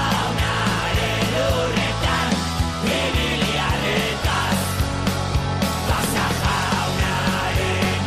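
Nothing stood out as a technical problem on listening to this audio.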